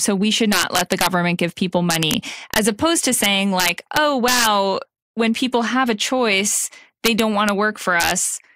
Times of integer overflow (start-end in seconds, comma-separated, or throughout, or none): 0.53-1.07, 1.90-2.14, 2.54-2.58, 3.24-4.47, 7.06-7.49, 8.00-8.11